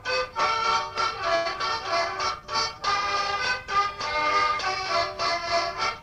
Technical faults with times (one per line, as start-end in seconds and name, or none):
1.35-1.47 short stall from a late packet
1.53-1.56 short concealed packet loss
2.40-2.80 jitter buffer slow-down